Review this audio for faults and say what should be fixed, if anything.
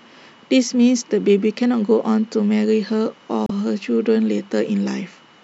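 Damaged data in a compressed stream, 3.46 to 3.52 s: corrupted bytes cause the decoder to misread those frames and lose sync until it finds the next valid frame header, so the speech breaks into a brief glitch of about 50 ms. Checksum-verified transfers, with metadata kept out of the audio payload, would prevent it.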